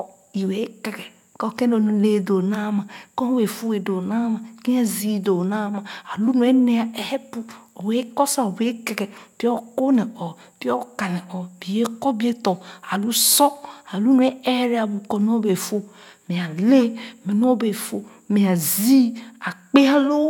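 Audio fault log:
No technical faults are audible anywhere in the speech recording, with the signal holding steady level, continuity and timing throughout.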